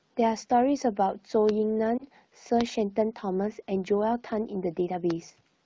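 A lost AMR speech frame falls at 1.98 to 2.03 s, where a single 20 ms frame failed its checksum over the radio link. The AMR-WB decoder covered the gap by repeating the previous frame's pitch and vocal tract settings at reduced gain. It is heard as a short dip with a slight warble, and the sound resumes a touch thin for an instant. The surrounding wideband coding keeps its usual light band-limited character.

A loud pop occurs at 2.61 to 2.63 s, peaking about 20 dB above the speech, and a second at 5.11 to 5.13 s, about 15 dB above it. Each is a single sharp click riding on top while the speech carries on beneath. The abrupt onset points to a sudden voltage step, likely from static discharge or a driver glitch, shaped by the circuitry after it.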